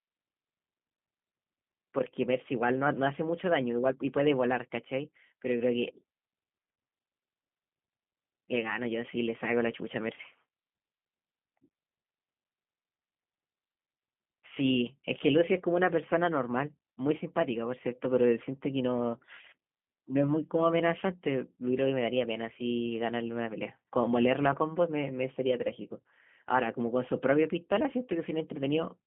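Throughout, the speech carries G.729 codec damage: a narrow band of roughly 150 Hz to 3.4 kHz, plus rough, synthetic, pulse-built texture consistent with 8 kbit/s coding.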